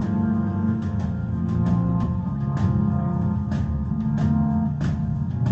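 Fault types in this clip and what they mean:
Skip ahead: At 2.03 to 2.05 s playback jumps forward with no gap filled. Roughly 0.4 s of audio is missing, apparently discarded while later audio was already queued, and the two sides of the cut are butted together almost directly.
Jitter buffer speed-up: From 2.36 to 3.48 s the sound runs at 105% speed, and from 3.93 to 5.28 s at 104%, with unchanged pitch. The receiver trims short pitch-period slices repeatedly to drain excess buffered audio, removing a few tens of milliseconds in each stretch.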